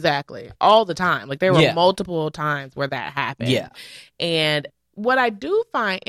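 Nothing stood out on listening to this speech recording.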